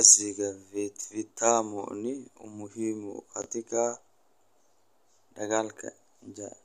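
At 1.0 s and again at 3.42 s the speech briefly jumbles, each time over about 40 ms, from 1.0 to 1.04 s and from 3.42 to 3.46 s. These are chunks out of order: a 20 ms piece of audio arrived one chunk late and plays after the piece that should follow it. Nothing is missing, but the swapped order leaves three hard joins, heard as a tiny scrambled moment. A dropout would leave a gap and a repeat would sound doubled.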